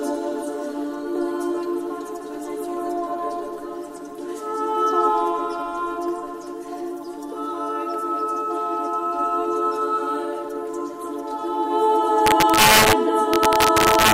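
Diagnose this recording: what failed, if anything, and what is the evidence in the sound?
Violent cracks tear through loud peaks from 12.27 to 12.93 s and 13.34 to 14.12 s: integer overflow, where about 3 to 4 dB of excess gain wraps samples to opposite sign.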